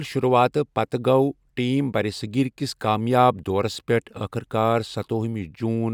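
Nothing technically wrong turns up in this speech recording, so there's no fault to point to here.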